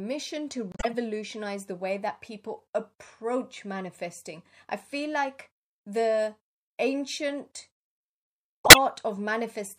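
At 0.72 s the speech drops abruptly into dead silence, and the hole lasts until about 0.98 s, roughly a quarter of a second, before the audio resumes on time. This is a corrupt frame muted: flipped bits left a run of compressed frames undecodable, so the decoder rejected them and the player filled their slots with silence. The length fits about eight consecutive frames of roughly 32 ms each, and no timing is lost around the gap.

Near the end, from 8.65 s to 8.78 s, a burst of misplaced energy cuts across the speech for about 0.13 s. This is a corrupt frame decoded: bits in the compressed data were damaged, but the decoder played the frames anyway, so misread gains and codes placed strong energy at the wrong frequencies. The duration points to a handful of successive damaged frames.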